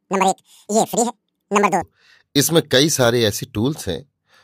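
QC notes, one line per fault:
0.00–1.82 s, section at the wrong speed: this stretch was likely played back against the wrong clock, running 1.92 times faster than recorded, so the speech is compressed in time and raised by about ten semitones, sounding high and hurried until normal pace returns.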